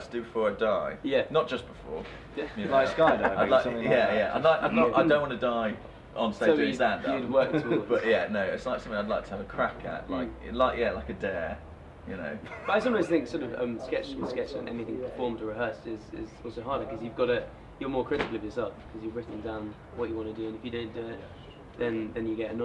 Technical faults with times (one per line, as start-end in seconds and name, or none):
none